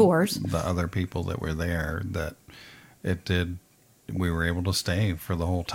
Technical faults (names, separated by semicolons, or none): corrupt frame decoded